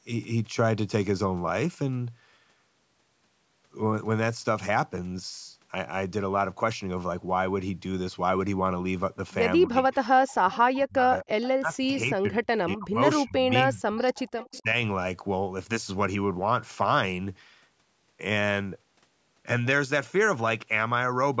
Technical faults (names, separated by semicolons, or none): speech suppressed in double talk; echo leak